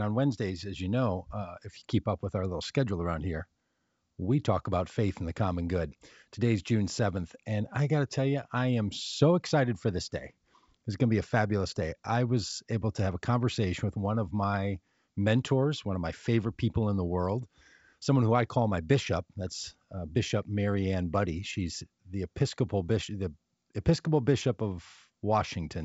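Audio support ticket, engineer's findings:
No faults found; G.722 wideband path working as expected.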